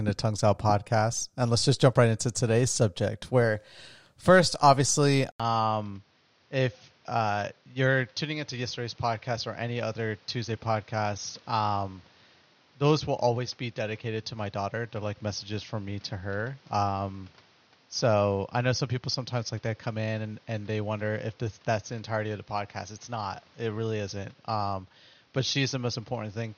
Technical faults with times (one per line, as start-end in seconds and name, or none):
5.32-26.57 input switched to a poorer device